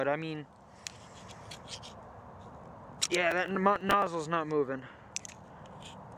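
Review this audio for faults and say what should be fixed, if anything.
Processor overload crackle runs from 3.31 to 4.07 s. The processor missed a string of deadlines on short buffers of a few milliseconds each. Each missed slot replayed a scrap of old audio with hard edges. Together they make gritty crackle. Prevent it with larger buffers or lighter processing load.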